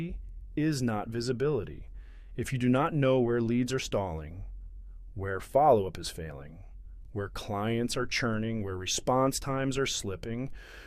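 No technical faults can be heard anywhere in this audio.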